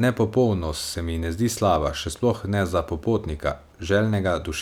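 No technical faults can be heard anywhere in this speech recording. There is nothing to place in time order, since no point in the audio calls for a timestamp.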